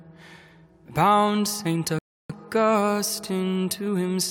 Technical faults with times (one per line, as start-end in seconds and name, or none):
1.99-2.30 rebuffering stall